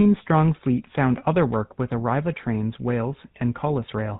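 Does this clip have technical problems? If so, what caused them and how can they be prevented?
Yes. Throughout, the speech carries the buzzy, gravelly roughness of the GSM full-rate codec, consistent with a 13 kbps encoding. It models the vocal tract and excites it with a sparse regular pulse train, and it passes nothing above 4 kHz. That pulse-driven grit, rather than the watery swirl of transform codecs, identifies it. To prevent it, capture or route the call through a wideband codec such as AMR-WB or Opus.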